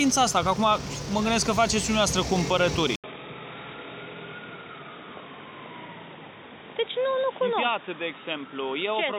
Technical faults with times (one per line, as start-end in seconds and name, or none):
2.96-9.19 input switched to a poorer device